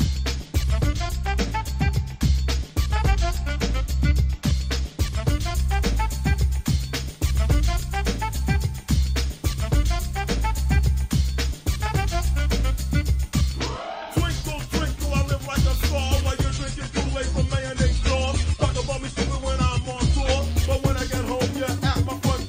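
At 16.42 s the sound switches abruptly to an adaptive stream at a lower bitrate, with no gap. The stream dropped quality when the connection slowed. Treble vanishes above 9.6 kHz and codec artefacts rise, which fits a much lower AAC bitrate. Full quality returns at 20.42 s.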